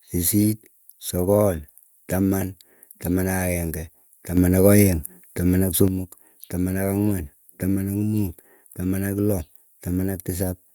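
A sudden gain jump runs from 4.37 to 5.88 s: the speech and the background noise rise together by about 6 dB in a single step, then drop back. This is likely a digital gain change applied instantly, with no ramp between levels.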